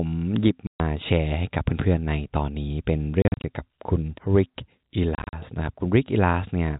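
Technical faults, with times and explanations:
0.67–0.80 s, 3.22–3.44 s, 5.15–5.33 s, packet loss filled with silence: the first is one solid 130 ms hole. The later two are scattered dropouts of up to 40 ms, fitting 10 ms packets. The holes have hard edges. The waveform drops flat to silence and the spectrogram shows blank vertical columns bordered by thin broadband lines.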